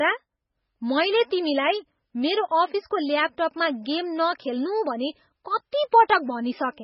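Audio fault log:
Throughout, MP3 compression: the encoder was likely starved of bits, which fits a very low rate of around 16 kbps. It discards everything above about 5.6 kHz, so the speech sounds dull and muffled. It also drops quiet frequency lines, and these flicker on and off from frame to frame, giving a heavy watery, swirling texture. With so few bits per frame, sharp onsets are smeared rather than crisp.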